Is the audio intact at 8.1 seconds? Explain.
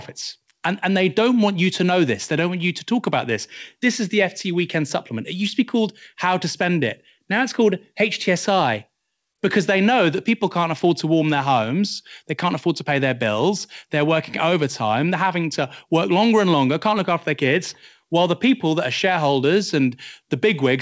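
Yes, the speech at 8.1 seconds is intact, carrying only the ordinary band-limiting of the WebRTC call path, which leaves nothing above 8 kHz, as fits G.722 at 64 kbps.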